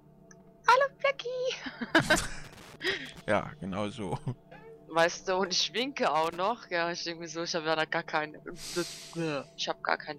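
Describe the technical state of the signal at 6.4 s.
At 6.4 s the signal has just come out of a burst of loose connector crackle, running from 6.24 to 6.37 s. A worn or dirty contact is making and breaking rapidly. It chops the audio into an irregular, scratchy crackle.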